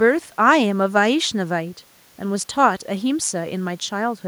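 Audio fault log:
No fault appears in this audio fault log.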